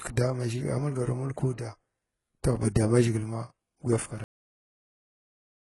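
From the first moment the treble sounds synthetic: sibilants come out gritty and lispy, and the upper range has a metallic, smeared brightness that doesn't track the lower harmonics. This is likely HE-AAC compression, heavily applied at a very low bitrate, around 12 kbps. Here spectral band replication copies lower bands upward under a coarse envelope instead of coding the real treble. On a spectrogram the top band looks blocky and repetitive, with harmonics misaligned at the crossover and nothing above 11.4 kHz.

At 4.24 s comes a cut-off end. The speech stops in the middle of a sound, with no decay. It then stays at flat digital silence to the end of the clip. The final stretch of audio was never written out or played, so the sound simply ends. On a waveform the signal drops from full activity to a dead-flat line at one sample. On a spectrogram every frequency ends at the same vertical edge, followed by blank space.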